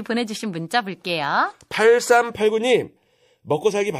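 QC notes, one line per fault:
0.69 to 0.71 s, pre-echo: a hiss smears in just ahead of a sharp speech attack, about 11 dB above the surrounding floor for 22 ms. The codec's 36 ms transform block never switched to short blocks, so quantisation noise sized for the attack leaked backwards.
2.35 s to the end, channel delay (comb filtering): the speech turns hollow and phasey, with the first notch near 1.5 kHz. One channel lags the other by roughly 0.4 ms, and summing them to mono cancels shared content at evenly spaced frequencies.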